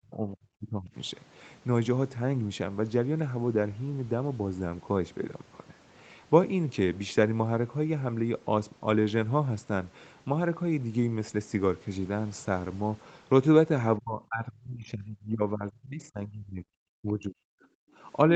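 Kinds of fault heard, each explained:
Speech suppressed in double talk: the speech sinks by around 30 to 40 dB at the very start, from 13.98 to 16.79 s, and from 17.01 to 17.65 s. The likely cause is an echo canceller that could not separate the near talker from loudspeaker echo while both sides talked, and so turned both down.
Background gated by the echo canceller: the room sound dips by about 9 dB for roughly 40 ms, from 17.93 to 17.97 s, then comes straight back. The echo canceller clamped the microphone down hard while the loudspeaker played, then released it.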